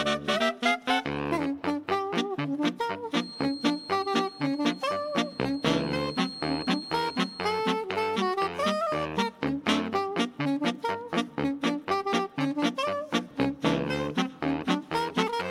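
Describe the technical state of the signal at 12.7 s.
At 12.7 s the signal is intact, with no dropout, distortion, glitch or other fault audible at that point.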